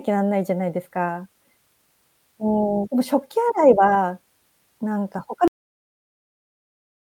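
Speech that ends with a cut-off end: at 5.48 s the audio stops in the middle of a sound, with no decay or fade, and everything from there to the end is digital silence. The final stretch of audio was never written out, so the playback simply runs dry. On a waveform the trace drops from full activity straight to a flat line at 5.48 s. On a spectrogram the energy ends in a sharp vertical edge, followed by an empty band of silence.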